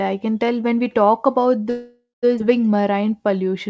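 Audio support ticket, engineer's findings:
Call audio freeze, 1.70–2.25 s: sound hangs and is stretched into a decaying buzz, then about 170 ms of silence, then resumes where it stopped. About 527 ms inserted, nothing lost. Likely packets delayed, jitter buffer underrun, receiver concealment.

Skip ahead, 2.39–2.42 s: abrupt jump forward with only a 9 ms join. Roughly 0.4 s of audio gone, sides spliced almost directly. Audio dropped in transit or by jitter buffer overflow with later audio already waiting, catching delay back up.

Jitter buffer slow-down, 2.76–3.69 s: speech drags to 89% speed at unchanged pitch, sounds drawn out. 109 ms added by repeating pitch periods and pause fragments to rebuild the buffer reserve. The call path's band limit at 8 kHz fits G.722 at 64 kbps.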